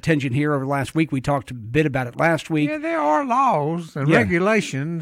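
No technical faults can be heard at any point in the audio.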